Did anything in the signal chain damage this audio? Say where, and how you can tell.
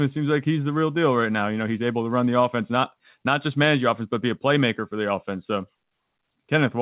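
No, nothing damaged this audio.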